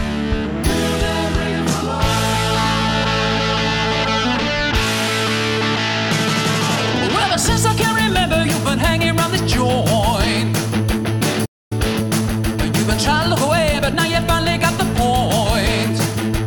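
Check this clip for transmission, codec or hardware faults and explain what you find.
Two connected playback faults show up, both around the 11-second mark.

At 11.45 s there's a playback stall: the sound cuts out mid-flow for about 0.25 s, resuming at 11.72 s. The likely cause is the player running dry of data or its thread getting blocked, so output just went silent until it recovered.

Right after, from 11.72 to 14.26 s, you get time-compressed catch-up. The player trims its backlog by dropping small slices and cross-fading the joins, so the audio runs about 1.1 times faster while keeping normal pitch.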